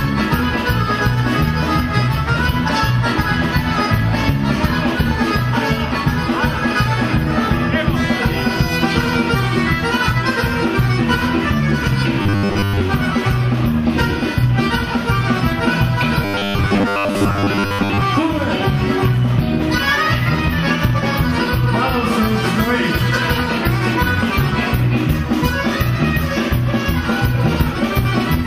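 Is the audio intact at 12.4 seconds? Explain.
No, robotic sound from repeated short buffers runs 12.22 to 12.81 s: likely repeated 10 ms buffers replacing most of the audio, giving a rigid metallic 100 Hz buzz.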